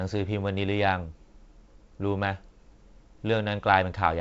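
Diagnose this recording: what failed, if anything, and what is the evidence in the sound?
No fault found in this recording.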